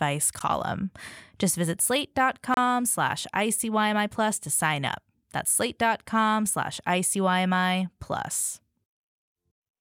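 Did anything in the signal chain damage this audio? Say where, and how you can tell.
Yes. The speech cuts to silence twice, for 14 ms at 0.39 s and 29 ms from 2.54 to 2.57 s, then resumes where it stopped. This is likely a Bluetooth stall on the wireless playback link: delayed packets emptied the headphone buffer until resent ones arrived.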